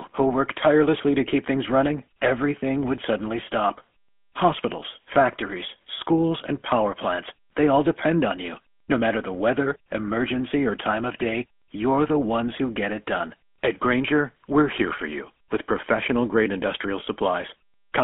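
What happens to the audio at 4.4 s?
At 4.4 s the speech has a buzzy, gravelly roughness and a narrow, boxy tone, with nothing above about 3.4 kHz and little below 200 Hz. That comes from the GSM full-rate codec, which runs through the whole clip rather than starting here. It rebuilds the voice from a vocal-tract model fed with a sparse pulse train instead of the true waveform. That damage is plainly audible, and the sound fits a 13 kbit/s encoding.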